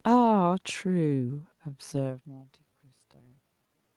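From 0.79 s to the end at 3.96 s, the speech abruptly slows to 0.70 times its pace. This time-stretched section was likely produced by software repeating short pieces. Pitch holds steady, unlike a plain playback slowdown, so it drags rather than sounding deepened.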